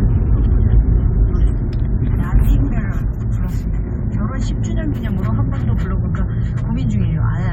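Sound recording with no audible technical faults anywhere in it.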